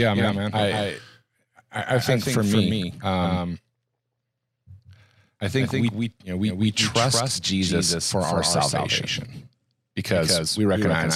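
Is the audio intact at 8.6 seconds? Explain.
No. At 8.6 seconds, as throughout the clip, a doubled audio track is audible: a full-band copy of the speech trails by about a fifth of a second, roughly 5 dB quieter, with no decay or room colour. It is likely caused by a second, slower capture path. On a spectrogram every syllable appears twice, with a fainter identical copy shifted right.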